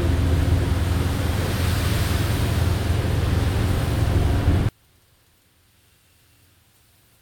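From 4.69 s to 7.21 s the sound collapses by about 37 dB, likely one channel inverted, so shared content cancelled in the mono sum.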